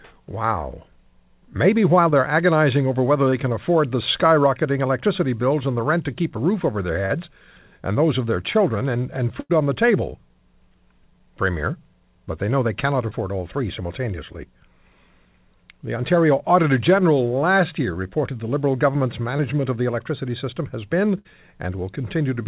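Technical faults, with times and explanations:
2.10–2.14, 3.30–3.34, 7.06–7.12, 13.09–13.13 and 19.37–19.41 s, short concealed packet loss: Each is a brief smear or wobble lasting 20 to 40 ms, such as right after "a roof over their" and between "they know they cannot" and "all three simultaneously". A packet of the call arrived too late to decode, so the receiver stretched the preceding sound to cover the hole and blended back into the real audio.
9.40–9.51 and 21.19–21.27 s, burst of packet loss: A held buzz or fading hiss briefly replaces the sound, then the audio resumes slightly further on. The first gap falls between "their children and and" and "on the table" and loses about 100 ms. The second loses about 60 ms. Several consecutive packets of the narrowband G.711 call, with nothing above 4 kHz, went missing, so the decoder extended and faded the last sound across the gap.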